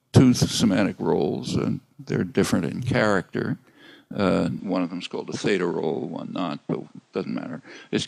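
At 4.59 s the sound abruptly loses its top end, with nothing above 9.5 kHz from there to the end, and it drops by roughly 5 dB. A faint new background noise appears, well below the signal. There is no gap at the change. The likely cause is an input switched to a poorer device. A plain low-pass filter or codec bandwidth drop would narrow the band without bringing its own noise floor and level shift.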